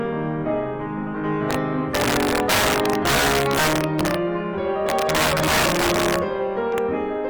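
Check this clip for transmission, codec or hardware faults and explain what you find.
There's one fault here, and it runs through the whole music clip: integer overflow. The signal is driven roughly 6 dB past the top of the integer range, and instead of being clamped, those peaks wrap around to the opposite sign, jumping across the full scale. Only a few percent of samples go over, so it's the loud moments that suffer, and you hear harsh, violent cracks on them, much sharper and nastier than ordinary clipping.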